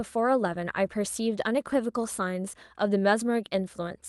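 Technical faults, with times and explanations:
Nothing stood out on listening to this speech clip.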